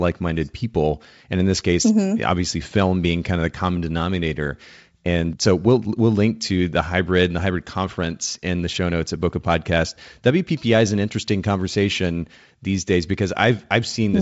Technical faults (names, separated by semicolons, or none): none